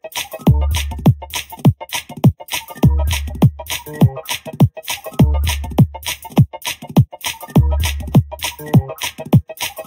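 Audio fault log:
throughout, channel delay (comb filtering): one channel arrives roughly a third of a millisecond late, and summing the two to mono cancels their shared content at evenly spaced frequencies, the first near 1.5 kHz and more at regular steps above it. The audio sounds hollow and phasey rather than simply muffled. Unlike a low-pass filter, the high end is not cut off but riddled with repeating notches, and the offset is far too short to be heard as an echo.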